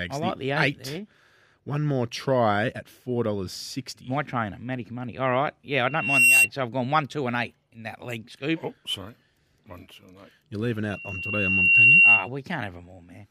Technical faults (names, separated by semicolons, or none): loudspeaker feedback squeal